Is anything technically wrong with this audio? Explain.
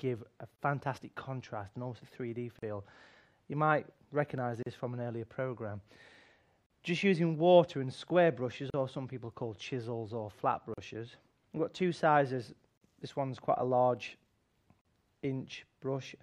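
Yes. There are gaps at joins of encoded pieces, at 0.56, 2.59, 4.63, 6.66, 8.70, 10.74, 12.78 and 14.81 s. The first gap lasts about 30 ms and the rest about 38 ms. They come from separately encoded pieces joined without trimming the encoder's start delay or last-frame padding. Unlike random dropouts, they repeat every 2.0 s, their edges are codec-smeared, and the sound resumes exactly where it stopped.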